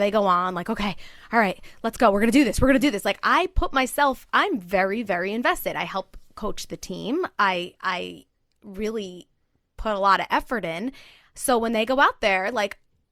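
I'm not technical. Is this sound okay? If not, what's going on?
Yes, this one's fine: nothing goes wrong anywhere in the recording, so there's nothing here to worry about.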